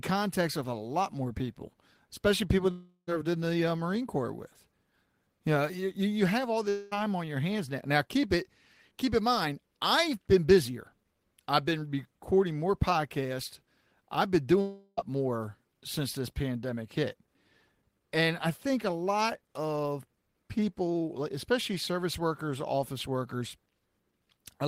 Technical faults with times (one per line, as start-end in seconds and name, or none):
2.71-3.09 long network dropout
6.69-6.93 long network dropout
14.61-14.99 long network dropout